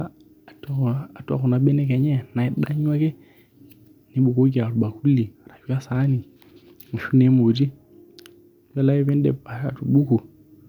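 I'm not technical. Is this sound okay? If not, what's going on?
Yes, nothing stood out as a problem when listening to this recording.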